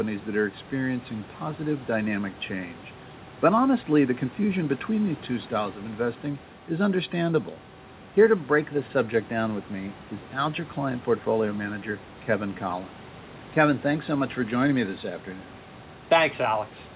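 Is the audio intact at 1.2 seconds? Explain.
Yes, the speech at 1.2 seconds is intact, with nothing interrupting or damaging the audio at that moment.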